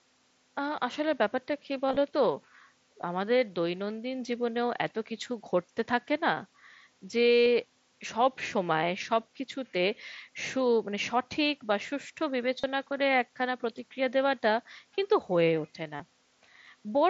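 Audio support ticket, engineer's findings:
Concealed Bluetooth headset packet loss at 1.87–1.96 s (brief scattered gaps), 7.32–7.46 s, 12.60–12.64 s and 15.96–16.00 s. The headset-to-phone link is dropping voice packets, and the receiver fills each gap by repeating the best-matching stretch of the last 20 ms. The 7.32 s run is a held buzzy tone with a warble on recovery.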